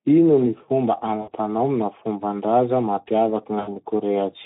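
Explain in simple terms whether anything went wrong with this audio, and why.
A couple of things went wrong with this speech clip. The whole thing has been squeezed through the Speex codec, an older speech codec from VoIP and game chat. Here it's set low enough that the damage is easy to hear: the voice comes across noisy and hoarse, because the codec doesn't have enough detail to rebuild it properly. Any high, crisp sound is just a fuzzy hiss standing in for the real thing.

On top of that there's VoIP packet loss concealed by the speech codec, twice: around 1.21 to 1.31 s and again around 3.59 to 3.72 s. Chunks of the stream went missing, about 60 ms the first time and 80 ms the second. Instead of going silent, the decoder kept guessing by repeating the last bit of voice it had, fading it down. That gives a short buzzy tone or smeared noise, and the voice stays weak or warped for a moment after the audio comes back.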